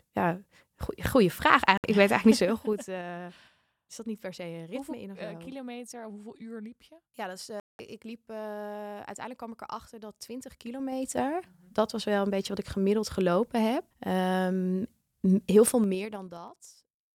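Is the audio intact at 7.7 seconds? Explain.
No, a digital broadcast dropout mutes the speech from 7.60 to 7.80 s as the receiver loses frames; waveform flatlines, spectrogram shows a blank gap, resuming at "ik liep".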